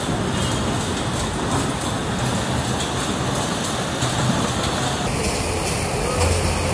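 The final stretch of the audio, from 5.07 s to the end at 6.73 s, has a wrong sample rate fault. Everything there drops in pitch by about 6.5 semitones and slows to 0.69 times its proper speed. Pitch and tempo fall together by the same ratio. That points to samples played back slower than they were captured, with no rate conversion. The ratio fits 32 kHz material played at 22 kHz.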